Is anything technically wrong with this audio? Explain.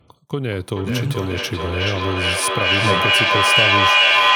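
Yes. From 0.42 s to the end there is feedback echo between two devices: one device replays another's microphone feed, which is picked up again and missed by either echo canceller. The speech returns roughly every 0.4 s, thinner and ringing, and builds rather than decays, peaking about 7 dB above the speech. A spectrogram shows stacked, evenly spaced copies with narrowing bandwidth.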